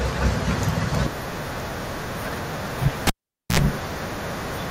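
At 3.07 s a cable pulled and plugged in cuts the speech with a pop, 0.47 s of near silence, then a 69 ms burst of 60 Hz buzz before it returns at 3.59 s. The buzz and pops mark it apart from a plain dropout.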